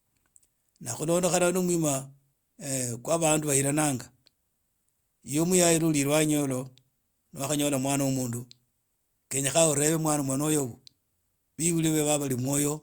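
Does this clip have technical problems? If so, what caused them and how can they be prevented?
No, there are no technical problems to report in this speech recording. Nothing in it calls for a fix or a preventive step.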